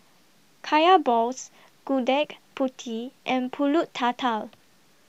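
Low bit depth without dither runs throughout this speech clip: grainy, signal-following grit at about 45 dB below the speech, likely from truncation to around 10 bits.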